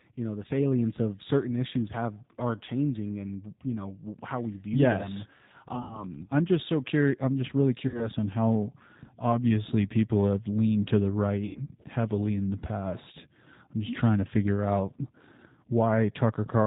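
Throughout, the G.729 codec at 8 kbit/s removes everything above 4 kHz and makes the speech plainly rough and synthetic. VoIP packet loss concealed by the speech codec appears at 5.75–6.06 s, 7.88–8.11 s and 11.47–11.59 s. Each time, the decoder stretches the last sound into a fading buzzy tone or coloured noise, and the speech stays weak for a moment afterwards.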